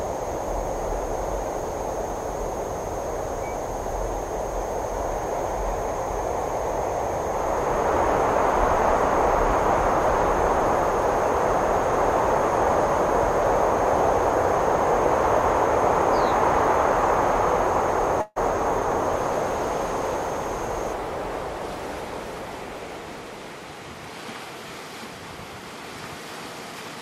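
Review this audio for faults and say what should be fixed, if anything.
At 18.21 to 18.38 s there is a call audio freeze: the sound is stretched into a fading buzz or hiss for about 146 ms, ending in roughly 20 ms of silence, then resumes where it stopped with nothing lost. The likely cause is delayed packets draining the jitter buffer. Prevent it with steadier network delivery or a slightly deeper jitter buffer.

From 26.72 to 26.97 s a jitter buffer speed-up runs the audio at about 119% speed at unchanged pitch, trimming around 50 ms in short pitch-period cuts to shed excess buffered delay, so the passage sounds hurried. Prevent it by smoothing packet arrival so delayed bursts don't overfill the buffer.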